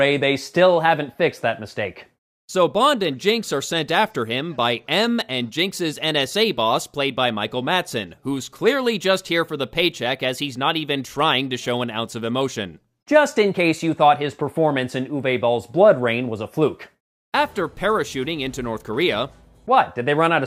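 No technical faults can be heard anywhere in the audio. Nothing in it calls for a timestamp or a fix.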